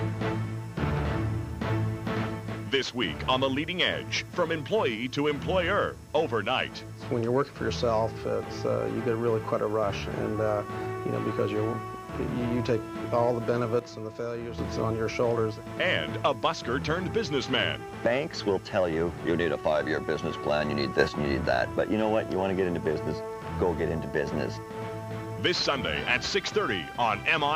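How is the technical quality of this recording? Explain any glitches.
The recording has two sudden gain jumps. From 13.79 to 14.58 s the level falls by about 7 dB, and from 20.99 to 21.08 s it rises by about 6 dB. In each case the sound and the background noise step together in a single instant, likely because a gain setting was applied without a ramp. That instant step, with the noise floor moving in lockstep, tells it apart from compressor pumping, whose level changes glide over tens of milliseconds.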